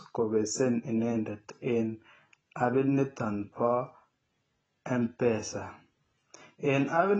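Throughout, the speech is band-limited with nothing above 8.3 kHz, dull and smeared with a warbling edge, likely AAC compression at a low bitrate around 20 kbps.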